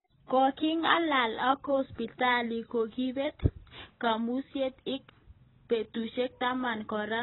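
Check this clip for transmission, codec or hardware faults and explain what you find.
There is one fault, present throughout the speech: heavy AAC compression, likely the cause. Nothing survives above 4 kHz, so a spectrogram shows a hard ceiling, consistent with AAC-LC at a very low bitrate, around 16 kbps, discarding coarsely quantised frequency lines. Sibilants sound dull and smeared, with a warbling, fizzy texture on sustained sounds.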